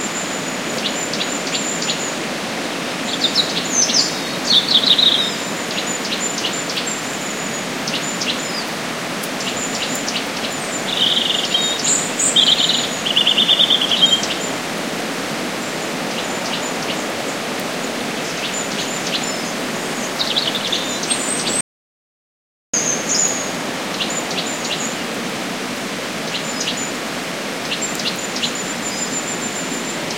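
At 21.61 s the sound cuts out abruptly into an audio dropout to silence lasting about 1.13 s, resuming at 22.74 s; likely the input signal was lost while recording continued, writing silence. The waveform flatlines, and the spectrogram shows a blank vertical band with no background noise.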